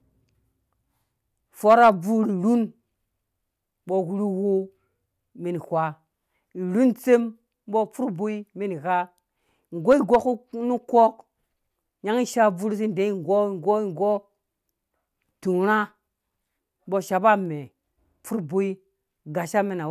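No technical faults can be heard anywhere in the speech recording, and the signal stays steady and intact throughout.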